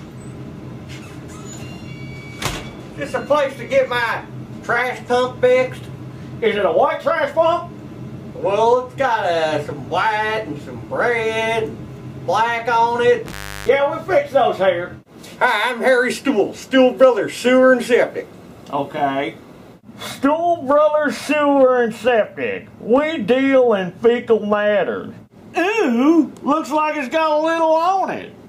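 At 13.26 s the audio crackles and then drops out, returning with another crackle at 13.69 s, and only faint hiss fills the gap of roughly 330 ms. This is an intermittent contact: a loose plug or cable briefly lost connection, breaking the signal path.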